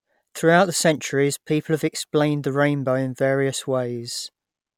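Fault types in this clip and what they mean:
No technical faults can be heard anywhere in this speech recording; the signal stays continuous and steady throughout.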